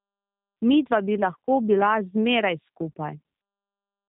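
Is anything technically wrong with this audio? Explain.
Yes. Throughout the speech, the G.729 codec damage is plainly audible. The codec rebuilds each 10 ms frame from a vocal tract filter, a pitch predictor and a few pulses. Nothing above 3.8 kHz survives. The voice sounds muffled, rough and slightly synthetic, which fits 8 kbit/s.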